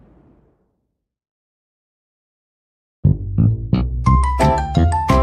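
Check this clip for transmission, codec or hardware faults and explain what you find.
Nothing in the clip points to a transmission, codec or hardware fault. The audio runs without any audible interruption, distortion or damage.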